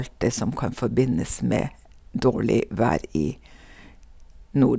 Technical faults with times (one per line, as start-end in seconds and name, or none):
none